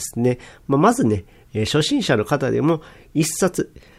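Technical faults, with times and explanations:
No technical faults can be heard in this speech.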